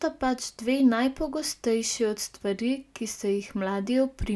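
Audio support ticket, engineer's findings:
No faults found on the speech recording. Nothing to escalate.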